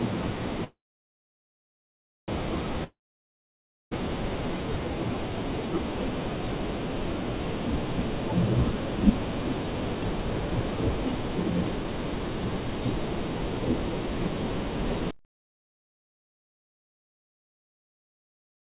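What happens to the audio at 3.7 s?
Audio likely stopped arriving in a long network dropout from 2.84 to 3.93 s. The last sound fades as a buzz, leaving silence at 3.7 s.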